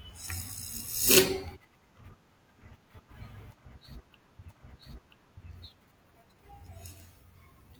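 At 4.46 s the speech jumps back and a stretch plays a second time. The repeat runs to 5.44 s and adds 0.98 s to the audio. This is a stream segment repeated. The player fetched or queued the same piece of the stream twice and played both copies in a row. It sounds like about a second of speech playing over again. A small blip marks the point where playback leaps backwards.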